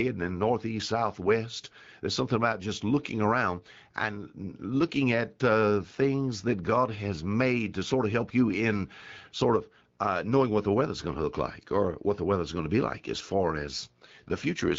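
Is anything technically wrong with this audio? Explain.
Yes. From 13.60 to 14.78 s, after "be like as far", an AMR rate drop makes the speech rougher and more synthetic, consistent with the wideband codec falling from 12.65 to 8.85 kbit/s. Fewer bits go to the sound and more to error protection. Unlike packet loss or a bandwidth switch, there is no gap and no narrowing of the band.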